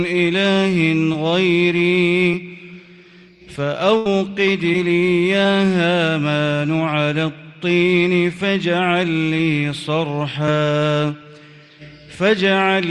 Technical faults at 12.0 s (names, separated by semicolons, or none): none